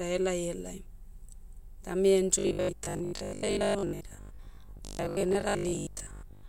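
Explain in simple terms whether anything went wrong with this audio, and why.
From 2.39 s to the end, the speech turns into a stiff, metallic buzz pitched at 50 Hz. This is robotic sound from repeated short buffers, likely caused by audio arriving too slowly, so the software repeats tiny 20 ms scraps, about half the time, instead of real sound.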